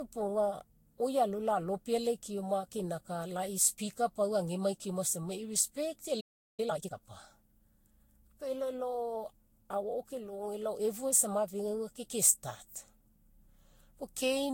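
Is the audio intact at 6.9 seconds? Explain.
No. At 6.9 seconds you're inside a time-compressed catch-up running from 6.60 to 6.96 s. The player is clearing a backlog after a stall by snipping out tiny slices and cross-fading the rest, so the audio plays at twice normal speed, hurried but at the same pitch.

On top of that, the whole clip carries generation loss, likely from repeated re-encoding, something like seven passes through a lossy codec such as Vorbis at around 60 kbit/s. It sounds swirly and hollow, and attacks are smeared.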